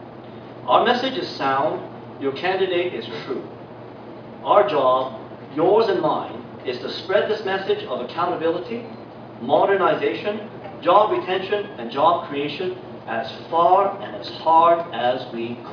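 Nothing stood out on listening to this recording.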